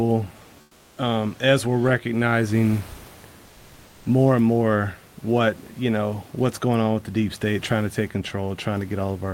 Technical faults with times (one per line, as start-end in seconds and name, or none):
0.63-0.95 comfort noise in place of the background
7.44-8.10 stuck bit